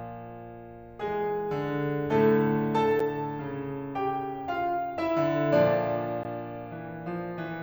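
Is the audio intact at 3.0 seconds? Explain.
No. Right at about 2.99 s the music drops out for roughly 8.7 ms, a block of digital silence where the samples were simply zeroed. Most likely the program didn't fill its output buffer in time. There's no fade into or out of the gap, so the waveform jumps to zero and back, and because the hole is so short, those two hard edges merge into a single sharp tick rather than an audible pause.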